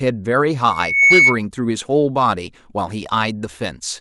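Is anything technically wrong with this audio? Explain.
Yes. From 0.7 to 1.39 s, loudspeaker feedback squeal: the microphone re-amplifies its own loudspeaker, so a 2.2 kHz tone swells within about a third of a second to roughly 10 dB above the speech.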